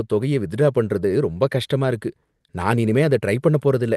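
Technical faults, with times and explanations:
Throughout: clock drift between sender and receiver. The sending device's audio clock runs roughly 4 percent faster than the receiving end's, so samples arrive a little quicker than they are played out. The jitter buffer keeps filling beyond its target, and the receiver has to shed material to keep latency from growing. The mismatch never settles, so the sound carries a faint, persistent unevenness in its pacing rather than any single obvious glitch.
0.19 s to 3.97 s: repeated timing corrections. To cope with the faster sender, the receiver keeps cutting out short slices of audio, always removing and never repeating, so the net effect is playback running at about 104 percent. The cuts fall at irregular spacing, each too brief to register as a dropout. The Opus coding on the call path is band-limited to 12 kHz in a way that fits a 32 kbps setting.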